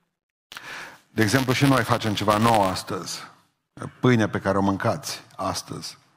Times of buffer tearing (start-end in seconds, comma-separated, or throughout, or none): 0.00-2.78